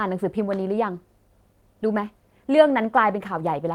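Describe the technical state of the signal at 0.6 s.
Nothing is wrong with the signal at 0.6 s; the speech there comes through intact, with no dropout, click, distortion or other technical fault.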